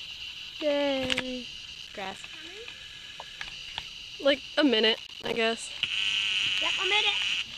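From 1.75 to 2.19 s, and again from 4.95 to 5.36 s, the sound breaks into bursts of processor overload crackle. Missed buffer deadlines leave short silent dropouts, each around 5 ms long, which fits a small processing buffer. The second burst is denser, with roughly twice as many gaps as the first. On the waveform these show as flat silent dropouts with hard edges. A spectrogram shows thin vertical broadband stripes across both spans.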